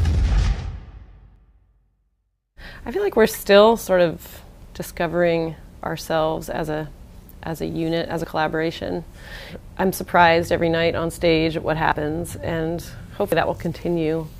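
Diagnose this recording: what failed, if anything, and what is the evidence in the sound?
Abrupt forward jumps at 1.36, 8.24, 11.92 and 13.32 s, each losing around 40 ms, the last nearer 100 ms: likely a dropped buffer (overrun), with unread samples overwritten at the driver.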